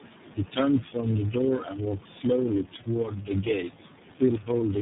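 Right from the start and for the whole clip, you're hearing tandem speech coding: the speech was decoded and re-encoded through about four low-rate coders in a row, likely ending in iLBC. Each pass roughs up the last, so it's muffled, warbly and gritty, with nothing above 3.8 kHz.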